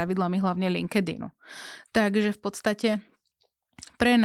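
The speech shows the light, full-bandwidth character of Opus voice compression in its hybrid mode at a moderate rate, with no technical fault anywhere in the signal.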